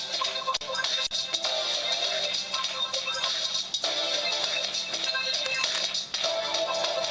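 At 3.72 s the sender's voice detector likely judged the signal to be background and briefly stopped sending, so the sound dropped by the voice detector is replaced by comfort noise for about 20 ms. It is heard as a tiny flat gap of steady hiss. From 5.46 to 5.83 s, cable scratch noise appears, likely from a worn cable, connector or control being moved so its contact resistance jumped around. It lays dense, uneven rustling over the sound, fairly loud, only a little below the signal itself. At 6.12 s the detector likely drops the sound again for another 20 ms patch of comfort noise. The top end stops at 8 kHz throughout, which fits a G.722 call path.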